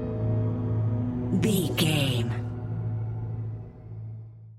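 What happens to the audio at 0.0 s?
Nothing goes wrong at 0.0 s; the audio starts cleanly, with no dropout, click or distortion at that point.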